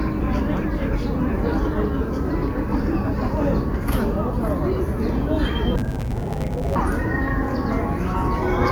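From 5.76 to 6.76 s, the audio turns dull and robotic. This is interleaved audio read as planar. The stream alternates left and right samples, but each 10 ms block was split in half instead. The first half went to the left channel, the second to the right. Each half plays stretched to double length, side by side. With blocks this short, there is no clear octave drop. Instead, a buzz at 100 Hz rides over the sound.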